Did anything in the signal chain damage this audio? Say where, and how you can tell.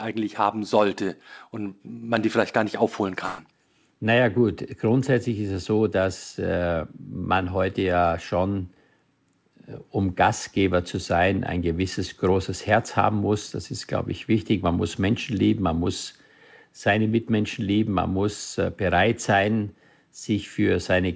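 Yes, at the network stage: a burst of packet loss hit the call stream from 3.26 to 3.40 s. About 120 ms of audio never arrived in time, so the receiver's concealment stretched the last decoded sound across the gap, fading it into a held buzz or hiss. Playback then picks up later, and that 120 ms of audio is gone. The band-limited sound around it, with nothing above 8 kHz, fits a G.722 call path.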